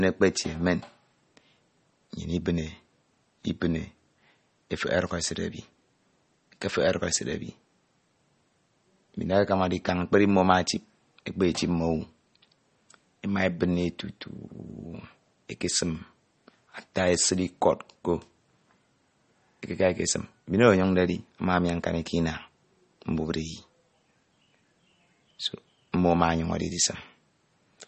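Likely MP3 compression, throughout: a bit-starved encoder has cut everything above 8.4 kHz and left plainly audible watery swirl, which fits a bitrate near 32 kbps.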